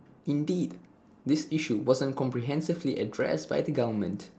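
No technical faults are audible.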